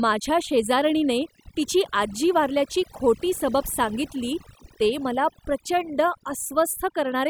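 Overdone noise removal runs through the whole clip: a noise reducer set far too hard mutes any frequency band near its noise estimate, taking quiet speech detail too. Gaps fall to near silence with twinkling specks, and a spectrogram shows scattered isolated dots amid blank patches.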